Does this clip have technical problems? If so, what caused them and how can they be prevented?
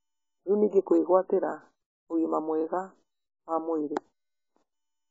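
Yes. Throughout the speech, the audio is dull and smeared, with nothing above 7.7 kHz and heavy codec damage: a warbling, fizzy texture on sustained vowels and sibilants. This points to AAC compression, likely AAC-LC at a very low bitrate, which fits roughly 16 kbps. Starved of bits, the encoder drops the top band, quantises the remaining spectrum coarsely and leaves gaps that smear in time. To prevent it, encode speech at 64 kbps or more, or keep a lossless master.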